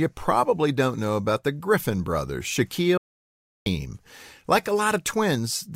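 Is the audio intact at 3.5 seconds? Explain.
No. At 3.5 seconds the speech is gone entirely: an audio dropout to silence runs from about 2.98 to 3.66 s, so roughly 0.69 s of sound is missing. The speech breaks off mid-flow and resumes just as abruptly, and the gap is dead silence with no room tone underneath. This likely happened because the input signal was briefly lost while the recording carried on writing silence, so whatever was said during that span is unrecoverable.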